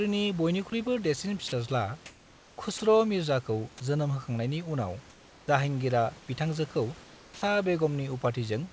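Speech, carried over a call path whose audio stops at 8 kHz, which fits a wideband G.722 codec. Room noise sits about 26 dB below the speech. Two short bits of sound drop out, from 1.48 to 1.52 s and from 2.78 to 2.80 s. For 40 ms and then 20 ms, the speech gives way to flat noise. This is likely sound dropped by the voice detector, which mistook the sound for background. Comfort noise then replaces the background at 5.10 to 5.48 s, 6.20 to 6.28 s and 7.04 to 7.42 s. The room's background noise turns steady and featureless. It is about 3, 2 and 5 dB quieter respectively. The likely cause is discontinuous transmission, with the receiver filling the pauses with synthetic noise.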